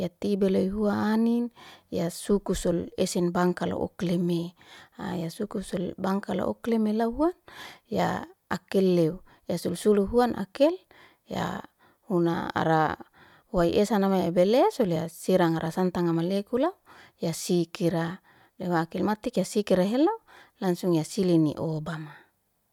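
No technical faults can be heard anywhere in the speech.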